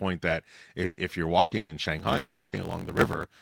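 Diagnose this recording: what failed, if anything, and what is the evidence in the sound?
The network stage dropped short runs of packets three times, at 0.85 to 1.00 s, 1.39 to 1.54 s and 1.57 to 1.72 s. This is a burst of packet loss. Each time, the receiver concealed the gap by extending the last speech for about 120 ms, fading it into a held buzz or hiss. The third burst ends in a brief 10 ms silence. The speech then picks up further along, with the lost stretch gone.

From 1.97 s to the end, a driver or buffer stage has a block size mismatch (truncated). It writes longer blocks than the next stage reads, and the excess at each block's end is discarded. This shows up as a steady 50 Hz buzz at the block rate. The speech also runs about 1.16 times fast while staying near its normal pitch, which fits a 1024-sample write block being cut short on every pass.

From 2.17 to 2.56 s the sound carries on as a fading buzz and hiss for about 360 ms. 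It then drops into 30 ms of silence before the speech returns further on, with that stretch missing. The likely cause is a long network dropout, during which no audio arrived and the receiver concealed the gap for as long as it could.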